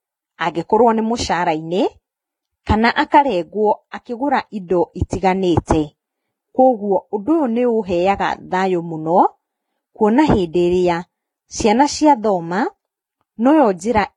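Speech runs the full clip with transcoding between lossy codecs heard throughout: nothing survives above 12 kHz, and two different kinds of coding damage sit on top of each other. The first layer fits a low-rate Vorbis pass of around 24 kbit/s, while a second, HE-AAC-style layer re-encodes those artefacts and adds its own. Single-pass compression would show one consistent artefact signature; this mixed character points to a likely chain of codecs.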